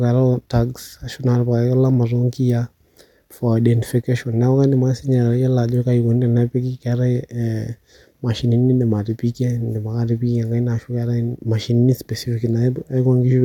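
No technical faults can be heard anywhere in the recording.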